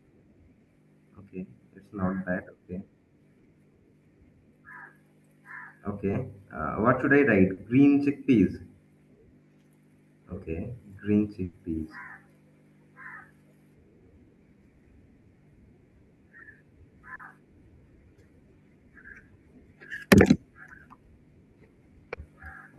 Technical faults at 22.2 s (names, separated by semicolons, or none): short concealed packet loss